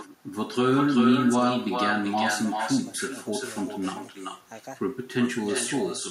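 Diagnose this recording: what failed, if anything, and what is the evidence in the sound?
Echo with no canceller runs throughout the speech, a call-processing failure. Each phrase returns around 400 ms later, about 7 dB quieter and thinner: the far end's loudspeaker feeds its microphone, and no canceller removes that path before transmission.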